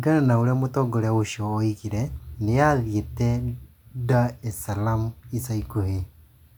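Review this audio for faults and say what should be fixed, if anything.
Nothing here needs fixing, as no faults turn up anywhere in this speech recording.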